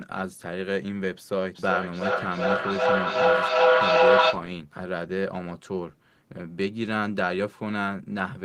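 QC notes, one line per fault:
1.55–4.5 s, feedback howl: the loop from microphone to loudspeaker and back is gaining level on every trip, so the repeats swell instead of dying away. They narrow to a tone around 500 Hz that pulses roughly every 400 ms and peaks about 10 dB above the speech.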